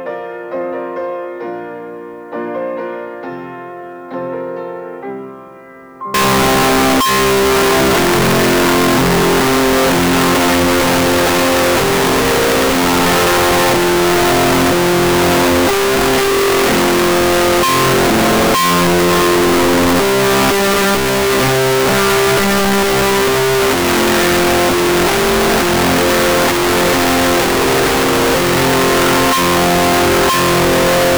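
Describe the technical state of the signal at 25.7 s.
At 25.7 s the sound is a very loud, harsh distortion in which even soft sounds are as loud as strong ones. It runs from 6.14 s to the end. The likely cause is signed and unsigned samples mixed up in the 8-bit data: the flipped top bit turns every zero crossing into a full-range jump.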